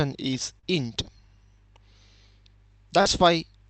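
At 0.59 to 0.65 s there is a short concealed packet loss. About 40 ms of audio arrived too late to decode. The receiver continued the preceding sound to fill the gap, then blended back into real audio. It comes across as a brief smear or wobble. The same happens at 3.01 to 3.07 s, again with about 40 ms missing. Through the call path the sound tops out near 8 kHz, which fits an Opus stream of around 32 kbps.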